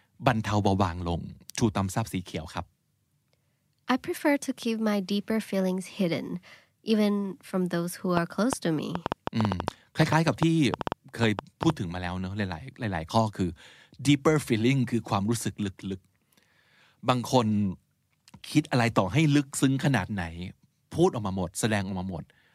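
Speech with a train of clicks from 8.17 to 11.71 s: about twenty similar pops, irregularly spaced near 6.2 per second, peaking about 15 dB above the speech, likely from electrical interference.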